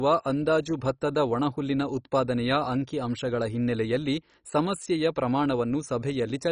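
Throughout the speech, dull, gurgling, granular distortion is likely MP2 compression starving sub-bands of bits, fitting about 32 kbps. A spectrogram shows flickering bands and nothing above 10.4 kHz.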